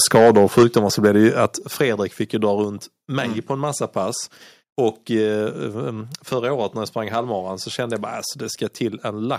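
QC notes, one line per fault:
0.14–1.46 s, microphone overload: the input level was likely set too high, driving peaks about 6 dB past the converter's ceiling. The tops of the loudest syllables are sheared flat, around a few percent of samples, giving them a harsh, crackling edge.
0.63 s, 1.62 s, 2.64 s, microphone volume stepped down: the call software likely reacted to the overload by cutting the device's input gain in single steps of about 3 dB, 5 dB and 2 dB. Speech and background drop abruptly in level at each point.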